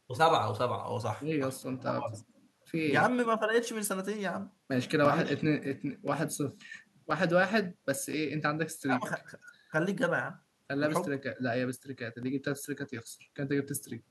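Speech with periodic USB or driver dropouts from 5.05 to 13.25 s: every 1.02 s, a few milliseconds of audio drop to silence, giving a steady tick heard only while speech is present. The strict metronomic spacing separates it from the irregular clicks of random buffer underruns.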